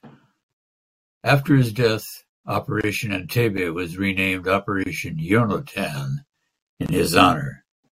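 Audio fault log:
2.81 s, 4.84 s, 6.86 s, gap at a join of encoded pieces: the speech was encoded in pieces about 2.0 s long and joined without trimming each run's start-up delay and end padding, so a silence of about 27 ms opens after "his death" and after "was renamed", with smeared edges, before the speech resumes where it stopped.
3.57 s, block of digital silence: for about 5 ms, just before "was renamed", the output buffer likely went unfilled and was zeroed. The abrupt drop to silence and back, with no fade, is heard as a short tick.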